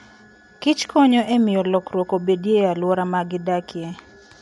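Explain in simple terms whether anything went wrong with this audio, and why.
Throughout the speech, the sound is dull and rough, with nothing above 11.5 kHz. The likely cause is Dolby Digital compression squeezing the audio too hard.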